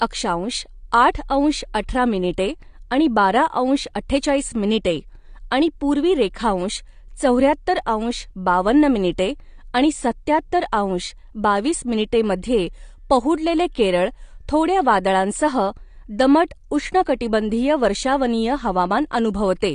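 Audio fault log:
Throughout, AAC compression: the speech sounds dull and smeared, with nothing above a hard spectrogram ceiling at 9.6 kHz, likely from a 32 kbps AAC-LC encode.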